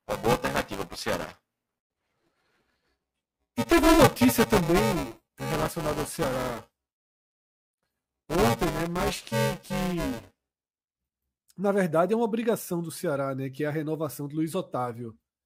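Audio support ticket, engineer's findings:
Buffer tearing, 0.00 to 10.82 s. Robotic buzz at 345 Hz over the speech, present only with signal, clears after 10.82 s. Probable component: playback ring buffer, writer and hardware read pointer slipped. Rate fits a 128-sample buffer. About a fifth of each period replays audio roughly 10 ms old, hard joins both sides.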